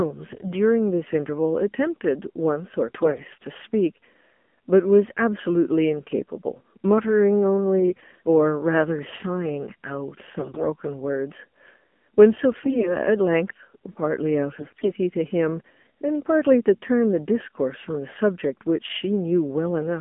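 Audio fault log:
throughout AMR narrowband mobile codec: speech is confined to roughly 200 Hz to 3.4 kHz and modelled as vocal-tract filtering driven by sparse pulses, so it sounds buzzy and synthetic, which fits a low rate near 7.4 kbps. Plain band-limiting alone would stay clean, without this artificial texture.
0.32–0.53 s, 2.88–3.25 s, 7.81–8.04 s, 10.40–10.66 s, 12.52–12.93 s, 14.58–14.91 s AMR bit errors: flipped low-priority bits misplace excitation pulses and skew pitch, gain and spectral detail, so each burst turns hoarse, scratchy and gargly. Unlike packet loss, there are no dropouts or muting, and pitch and level roughly hold.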